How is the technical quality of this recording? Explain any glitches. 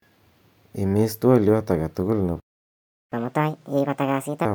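The recording has two linked playback glitches.

From 2.40 to 3.12 s, a playback stall silences the speech for about 0.72 s mid-flow, likely because the player ran out of buffered data or its thread was blocked.

From 3.12 to 4.45 s comes catch-up at higher speed: the player resamples its backlog at 1.5x, so the speech runs fast and sounds about seven semitones higher until normal pace returns.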